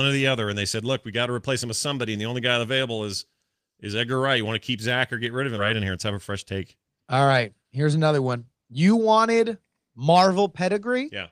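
At 5.57 s, just after "or get rid of", a skip ahead drops roughly a second of speech. Playback jumps forward with no gap. The two sides join directly.

From 5.75 to 6.91 s, a jitter buffer speed-up trims short pieces of pitch periods to cut excess delay. Speech runs about 8% faster, same pitch, slightly hurried.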